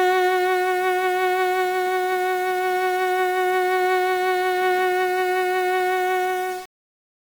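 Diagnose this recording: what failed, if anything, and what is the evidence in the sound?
The sample-format conversion likely reduced this music to 5 bits with rounding and no dither, so grainy distortion tracks the signal throughout, sitting only around 20 dB below it.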